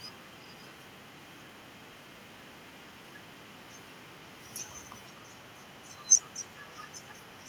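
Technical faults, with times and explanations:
0.00–6.75 s and 6.93–7.49 s, echo leak: a loudspeaker on one side likely feeds its microphone, and the echo canceller lets a residue through. That residue returns as a very faint copy of the speech, 486 ms late and about 40 dB down.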